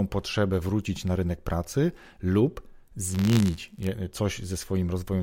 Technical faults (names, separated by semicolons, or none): buffer tearing